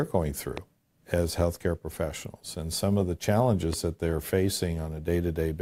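A sudden voltage spike, likely from a plug, switch, static discharge or driver glitch, was added to the signal path twice, producing a loud pop each time. The first runs from 0.57 to 0.60 s and the second from 3.73 to 3.75 s. Each is a single sharp transient about 10 dB above the surrounding audio, lasting around 20 ms, and the sound continues unbroken underneath.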